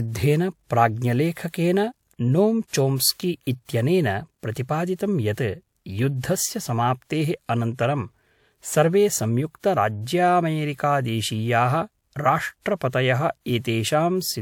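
Speech with pre-echo at 1.49 s, 3.42 s (just before "इत्यनेन प्रतिपादितं") and 12.61 s, each a hiss of about 45 to 52 ms leading into an attack. Block-spread codec noise fills the quiet gap before the onset; unlike reverb or echo, it comes before the sound, not after.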